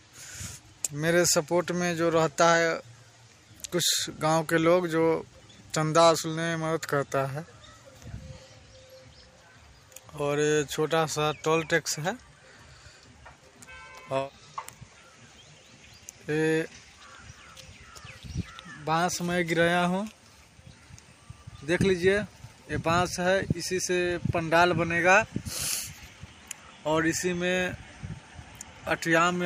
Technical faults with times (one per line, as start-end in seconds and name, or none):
none